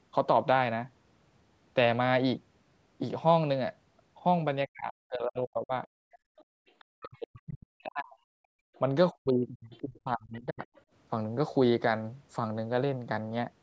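From 4.66 to 5.73 s the talker's voice sinks sharply, by around 40 dB at its deepest, for about a second in all. This is speech suppressed in double talk. The likely cause is that the echo canceller, faced with both sides talking at once, could not tell the near talker from the loudspeaker echo and turned everything down, so the voice dips and thins rather than staying level.

At 6.01 s the canceller clamps the microphone while the loudspeaker plays, and the room sound drops by about 30 dB until 6.6 s. This is background gated by the echo canceller, heard as a brief hole in the ambience. Overlapping it, from 6.12 to 7.4 s, the other side's voice leaks through, sitting roughly 30 dB below the talker as a faint second voice the canceller likely failed to strip out.

From 6.88 to 10.62 s double-talk suppression returns for about three seconds in total, again cutting the voice by around 40 dB at its worst, so it fades and breaks up in pieces. 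Within that stretch, a 50 ms gating dip of about 32 dB at 8.69 s is followed by a short scrap of leaked far-end voice at 8.74 s, about 35 dB down. From 9.71 to 10.81 s the other side's voice leaks through again at roughly 30 dB below the talker. Throughout, the call microphone processing leaves nothing above 8 kHz.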